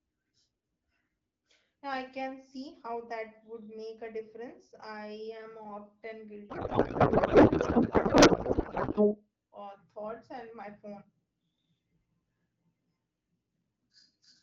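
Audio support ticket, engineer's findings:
Codec payload misread, 6.49 to 9.15 s: speech drops out into garbled noise and warble that barely tracks it. Points to the AMR framing, with octet-aligned payloads probably unpacked as bandwidth-efficient, so the fields land in the wrong places. Clears once both ends agree again. Outside that stretch the AMR wideband (HD Voice) codec has only light coding damage, which fits a rate around 12.65 kbit/s.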